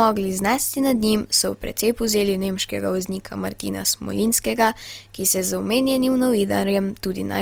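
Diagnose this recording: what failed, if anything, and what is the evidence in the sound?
Opus compression runs throughout the speech, a likely fault at the codec stage. The full bandwidth survives, but voiced sounds turn grainy and rough because the music-mode coder runs short of bits and fills bands with folded or noise-like energy, which fits a rate near 24 kbps.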